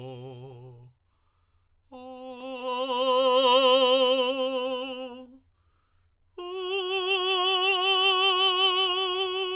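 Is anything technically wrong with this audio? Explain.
No, nothing is technically wrong with this audio.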